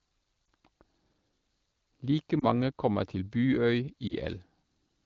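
Lost AMR speech frames cause three brief dropouts in this speech clip, at 0.45–0.47 s, 2.40–2.44 s just before "kommer til", and 4.08–4.14 s. Each sounds like a quick dip or warble, which fits a single lost 20 ms frame: radio errors corrupted the frame, and the AMR decoder filled the gap by reusing the last good pitch and vocal tract settings at reduced gain. The wideband AMR-WB coding itself stays clear, consistent with a rate around 12.65 kbit/s.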